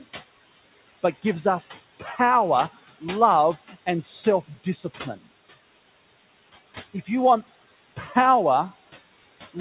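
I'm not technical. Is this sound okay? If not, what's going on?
No, there are two related problems. Noise suppressor artifacts run through the whole recording. A noise-reduction filter keeps turning the steady background noise down, moment by moment. So the noise dips when nobody is talking and creeps back underneath the speech. On top of that, the call line itself carries only a narrow, telephone-like range of sound.

Speech cut by the noise suppressor happens twice: from 2.0 to 2.19 seconds, and from 4.48 to 4.85 seconds, right after "love and". Both times the filter mistook part of the speech for background noise and turned it down along with the background. Each cut swallows roughly a tenth of a second. The second cut is the deeper one, so the speech there is turned down further.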